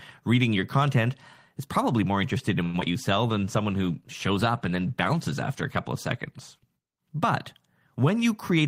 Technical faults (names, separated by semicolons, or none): repeated packet loss (robotic sound); jitter buffer slow-down; call bitrate drop